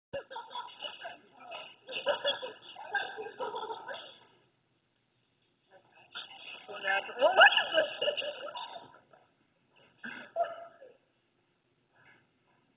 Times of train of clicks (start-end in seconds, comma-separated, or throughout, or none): none